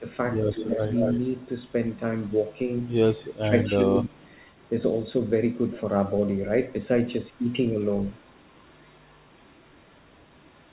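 An echo canceller that was likely unable to tell this talker from loudspeaker echo while both sides spoke pulled the speech down: briefly at 0.00–0.04 s and 0.63–0.80 s by around 10 dB, then at 3.24–4.16 s by around 20 dB, so the sound dips and thins in pieces. Echo leak, likely from the far end's canceller not removing all of what its microphone picked up, sends back a copy delayed by 235 to 248 ms. From 0.53 to 1.96 s it sits only about 5 dB below the speech and is plainly heard as a doubled voice. At 2.29–3.73 s, 4.05–4.70 s, 7.19–7.53 s and from 8.09 s to the end it falls to about 30 to 40 dB down, a faint trailing shadow within audio already limited to 4 kHz by the call path.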